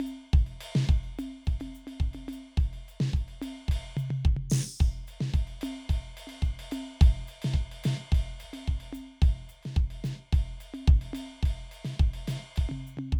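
No technical faults can be heard in this music.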